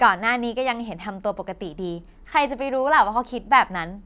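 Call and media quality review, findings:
No call or media quality findings to report for this speech clip.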